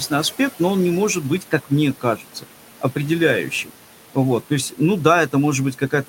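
A speech recording carrying noise suppressor artifacts throughout: background noise is pulled down by about 12 dB between phrases, leaving a patchy, blotchy texture across the spectrogram's quiet regions. Speech cut by the noise suppressor follows "но он не может", from 1.4 to 1.71 s and again from 1.94 to 2.45 s, with dips of about 12 and 11 dB. Soft speech energy is misjudged as noise, so brief stretches of the waveform visibly shrink, and the room noise, sitting about 17 dB under the speech, is turned down along with them.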